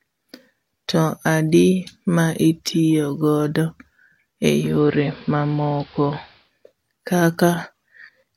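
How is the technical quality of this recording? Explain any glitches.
The recording has one glitch. From 4.46 to 6.53 s, digital radio blending to analogue crossfades over 357 ms to the AM broadcast. The treble is cut back and hiss rises to roughly 25 dB below the speech. A spectrogram shows the upper band blanked; the waveform level stays steady.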